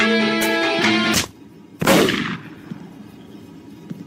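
At 2.35 to 2.37 s, a brief blip marks damaged data in a compressed stream: corrupted bytes make the decoder misread a frame and resynchronise.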